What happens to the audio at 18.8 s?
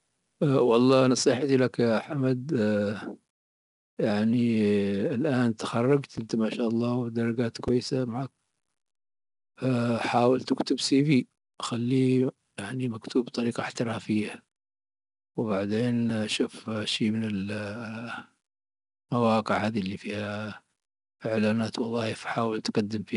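At 18.8 s the speech carries 4-bit ADPCM compression, present throughout: coarse predicted steps leave gritty hiss that rises and falls with loudness, unlike steady background noise, and nothing sounds above 10.6 kHz.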